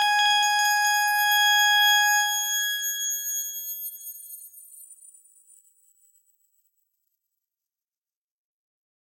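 No technical faults can be heard anywhere in the clip.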